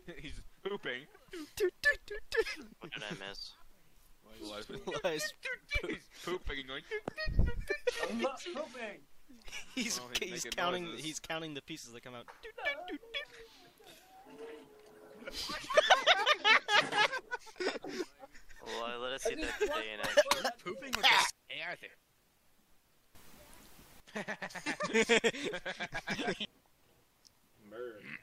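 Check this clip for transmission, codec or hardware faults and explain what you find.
No faults turn up anywhere in the clip. Nothing in the sound calls for a closer look at any stage of its path.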